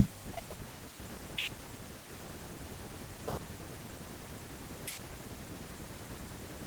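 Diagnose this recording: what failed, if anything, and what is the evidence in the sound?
Nothing has gone wrong here: the speech keeps its full band up to about 20 kHz, which fits an Opus voice path running in hybrid mode at around 24 kbps and doing its job as intended.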